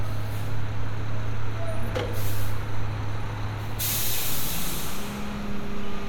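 No technical faults are audible.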